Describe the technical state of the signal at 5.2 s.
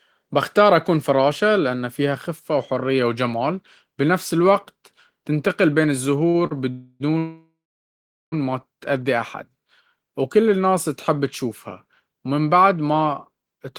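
The signal at 5.2 s is intact, with no audible fault at that moment.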